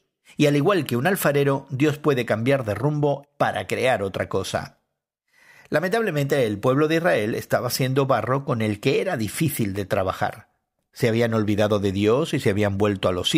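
No technical faults can be heard anywhere in this recording of speech; the signal stays continuous and steady throughout.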